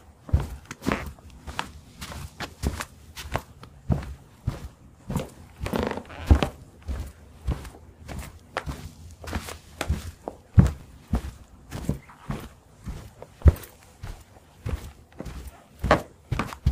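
At 10.79 to 10.81 s, a brief jumble breaks the flow. This is chunks out of order. A 10 ms chunk of audio landed one chunk late, so it plays after the chunk meant to follow it. Nothing goes missing, but the sequence is swapped. That leaves three hard joins packed into 20 ms, heard as a tiny garbled stutter. The same fault returns at 11.77 to 11.79 s, again one 10 ms chunk late, with the same scramble.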